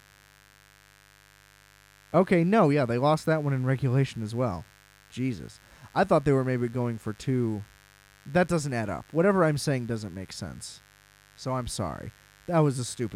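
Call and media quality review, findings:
Mains buzz across the full speech clip: steady, raspy buzz under the voice, roughly 30 dB below it. Probable component: dimmer, rectifier or unshielded cable on 50 Hz mains. Switching spikes twice per cycle spray harmonics up into the kHz range.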